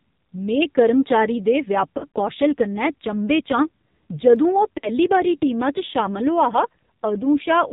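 Throughout, the speech sounds buzzy and synthetic with nothing above 4 kHz, the heavy damage of the AMR narrowband mobile codec at a low bitrate, consistent with about 5.9 kbps. From 1.98 to 2.16 s, the sound warbles and dips in short stutters. These are lost AMR speech frames: about 80 ms of audio is scattered over 160 ms, with the decoder stretching the last good settings through gaps of up to 40 ms. At 4.36 s a single sharp click is heard, likely from dropped samples, where a tiny fraction of a millisecond is missing and the waveform jumps. From 4.78 to 4.90 s another lost AMR speech frames gap drags the sound out and fades it, with about 60 ms concealed before the speech returns rough.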